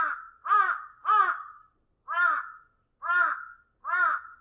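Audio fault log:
No faults are present in this audio. Nothing in the sound calls for an entry in this log.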